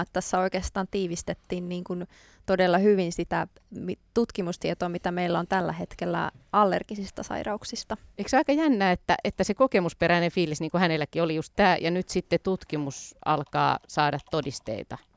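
No technical faults can be heard anywhere in the recording; the signal runs without interruption or damage.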